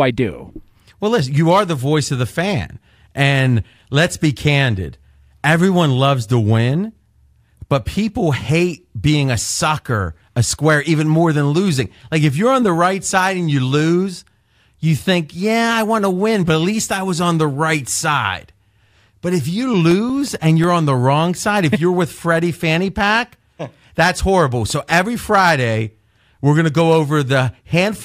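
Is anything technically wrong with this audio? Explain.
Yes. The speech carries CD scratch ticks in two short runs: five ticks between 19.91 and 20.64 s, the longest a few milliseconds, and four between 24.52 and 25.07 s, the longest around a millisecond. A scratch on the disc wipes out more data than error correction can restore, once per revolution, so the player patches or mutes those samples. What sets these apart from random clicks or vinyl crackle is their evenly spaced repetition, several per second, locked to the disc's rotation.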